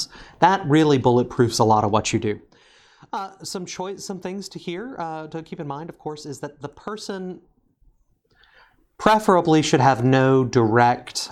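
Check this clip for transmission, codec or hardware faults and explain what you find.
The clip has one kind of fault: zipper noise, heard twice in the speech. From 2.14 to 2.68 s the level falls by roughly 15 dB in 2 dB jumps, about fifteen a second. From 7.26 to 8.66 s it rises by a similar amount in 2 dB jumps, around seven a second. Each jump is an unsmoothed gain step that leaves a small click, so the moving level sounds like ticking or zipping. Random clicks would not keep this even rhythm or coincide with a level move.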